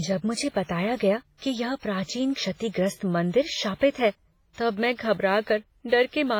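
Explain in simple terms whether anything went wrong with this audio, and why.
Yes, the speech sounds squashed the whole way through, with a washy, ringing quality and a hiss that swells and fades along with the talking. That's most likely WMA compression, pushed hard: the encoder smeared its rounding errors across short stretches and dropped quieter detail.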